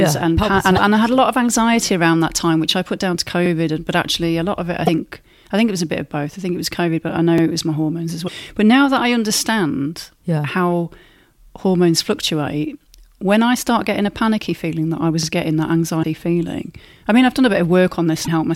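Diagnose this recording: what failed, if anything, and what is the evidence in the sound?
Codec stage: damaged data in a compressed stream, with 50 ms glitches at 0.73, 4.84, 8.25, 16.00 and 18.23 s. The decoder loses sync, which shows as broadband smears.

Buffer stage: overlapping chunks. The 4 s chunks restart 44 ms early, so a stutter repeats a 44 ms segment at 3.46, 7.38 and 15.23 s, with waveform discontinuities.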